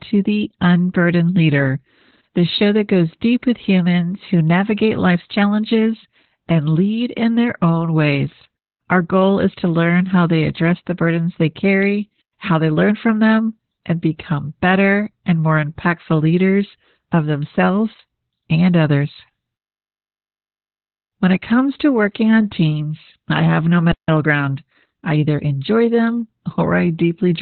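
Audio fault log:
Throughout: Opus voice compression. The speech is muffled, hoarse and a little robotic. Nothing is heard above about 4.3 kHz. That narrowband cut and the coarse, heavily damaged excitation fit SILK-only coding at around 8 kbps. It uses 20 ms frames.
23.92–24.08 s: playback stall. Right after "teams I have no" the speech drops out for about 0.17 s. Then it resumes where it stopped. The likely cause is the player running dry of data or its thread being blocked.
24.08–25.72 s: time-compressed catch-up. After the gap the speech runs about 1.1 times fast. The pitch stays normal. Small pieces are cut out and cross-faded so the player can work off the backlog from the stall.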